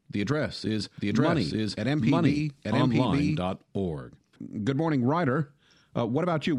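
From 0.98 to 3.40 s, just after "the address is", a doubled audio track: a second, equally loud copy trails about one second behind, likely from a slower duplicate capture path.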